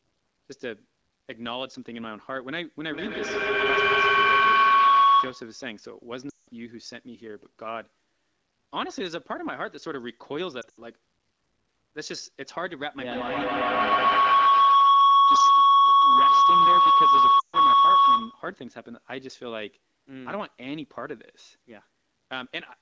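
Feedback howl, 2.88 to 5.66 s: two devices sharing the call in one room form a loop that gains level each pass, with a loop delay of about 150 ms, building a tone near 1 kHz that peaks about 14 dB above the speech.

Lost AMR speech frames, 6.30 to 6.48 s: about 180 ms of frames fail their checks. The wideband decoder reuses the last good sound with falling gain, so it drops to near silence within two frames before the voice returns weakly.

Lost AMR speech frames, 10.62 to 10.79 s: 100 ms of losses are scattered over 160 ms, with the longest gap 80 ms, giving a broken, warbling stretch rather than one clean dropout.

Feedback howl, 13.06 to 18.61 s: the same loop builds again into a tone near 1 kHz, about 14 dB above the speech, and lasts until the loop is broken.

Lost AMR speech frames, 17.40 to 17.56 s: 140 ms of frames drop inside that howl, and the sound drops to near silence within two frames.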